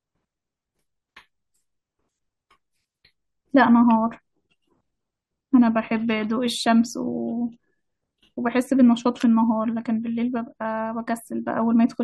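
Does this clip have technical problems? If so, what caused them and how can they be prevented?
No, this clip has no technical problems, so there is nothing to trace back or prevent.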